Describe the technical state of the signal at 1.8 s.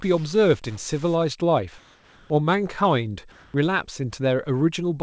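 Comfort noise in place of the background, from 1.78 to 2.30 s: the pause's real background gives way to steady, featureless noise at the same level, likely receiver-generated during discontinuous transmission.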